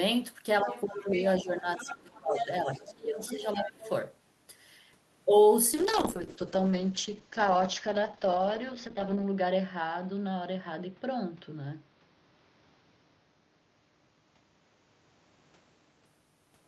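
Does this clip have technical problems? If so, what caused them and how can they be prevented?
Yes. Speech suppressed in double talk occurs from 0.62 to 1.05 s and from 1.21 to 3.87 s. The speech dips by about 10 dB and then about 15 dB. This is likely an echo canceller that could not separate the near talker from loudspeaker echo and turned both down. Better double-talk detection or a headset prevents this.

The other side's voice leaking through is heard at 0.70–1.15, 1.76–2.46, 2.72–2.93, 3.21–3.30 and 3.52–3.89 s. It ranges from nearly as loud as the speech to faint scraps. This likely reflects residual loudspeaker echo left in the microphone signal. Stronger echo cancellation, lower playback volume or headphones would prevent it.

A call bitrate drop runs from 5.74 to 16.11 s. The sound turns coarse and muffled, with the top end cut off at about 8 kHz, and it stays at its worst for about 3.5 s. 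This fits the encoder being pushed from around 32 down to 8 kbps. A steadier network connection or a higher minimum bitrate would prevent it.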